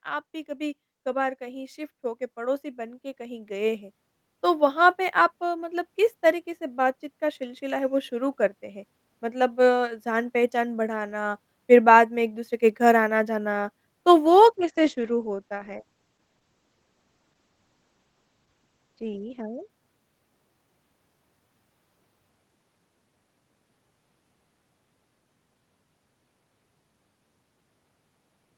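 From 0.05 s to 5.89 s the automatic gain control judges the input too quiet and steadily raises its gain, by about 14 dB, so the speech and the background noise behind it swell upward together. A second, gentler automatic gain rise follows from 7.19 s to 11.25 s, lifting the level by about 3 dB; the whole sound grows slightly louder again rather than any one part of it.

From 14.27 s to 19.75 s the call bitrate drops. The bandwidth estimate falls, and the encoder is pushed from a comfortable rate down to something that sounds like roughly 11 kbps, holding at that low point for about 5.2 s. At that rate the codec codes coarsely and narrows its audio band from 20 kHz to 8 kHz, so the speech loses its crisp top end and turns muffled and rough until quality returns.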